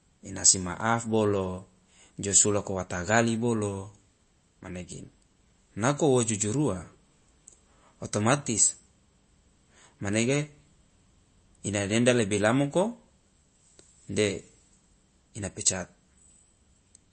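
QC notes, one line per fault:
Throughout, MP3 compression: the speech has a plainly audible watery, swirly quality, and nothing comes through above about 8.3 kHz. That's likely a low-bitrate encode, around 34 kbps, where the encoder cuts the top end and lets weak frequency detail flicker on and off between frames.
0.46 to 0.50 s, hard clipping: the peaks here were driven about 4 dB past what the stage could pass, so they got sliced flat. Those flattened tops throw off high harmonics, and you hear a short crackle on the peaks.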